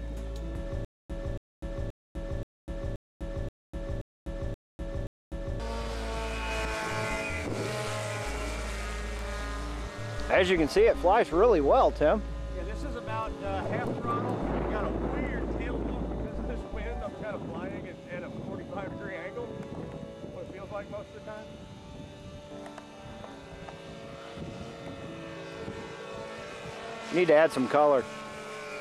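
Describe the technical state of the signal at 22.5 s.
Around 22.5 s the signal is intact, with no dropout, distortion, glitch or other fault heard at that point.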